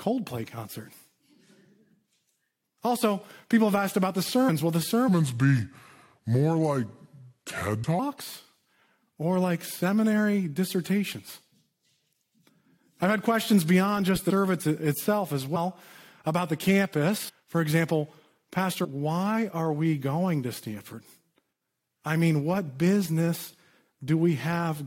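Compressed frames skipped at 4.48 s, just after "have asked about the", and again at 7.83, 14.29, 15.55, 17.28 and 18.84 s. Whole blocks of coded audio never reach playback, so the speech jumps ahead by a few hundred milliseconds at most, about 0.4 s at 17.28 s. The gaps match multiples of a roughly 21 ms frame.

A section at the wrong speed runs from 5.09 to 7.99 s. It plays at 0.783 times normal speed, so the speech drags and drops by about four semitones, deep and slow together. This is likely playback against a mismatched clock.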